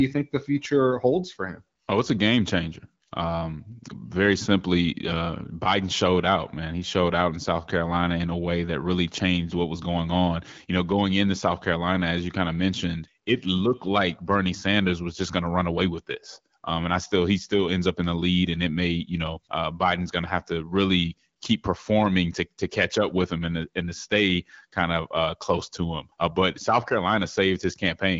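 No technical faults can be heard in this speech.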